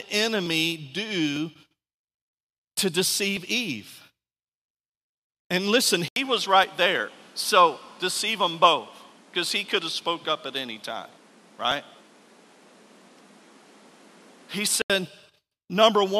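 The capture stream in this speech recording likely dropped samples at four points, 0.46, 1.36, 3.37 and 11.72 s, each time skipping well under a millisecond of audio. The waveform jumps straight from one value to a later one, so nothing audible goes missing, but each gap is heard as a single sharp click, a thin vertical line across the spectrogram. Between 6.08 and 14.9 s the input was likely switched to a poorer device. That second device passes a narrower band, so the speech turns duller and loses its airy top end. It also brings its own background noise, sitting around 30 dB below the speech, while loudness stays about the same. An 80 ms silence marks the changeover at 6.08 s, and the brighter original tone returns at 14.9 s.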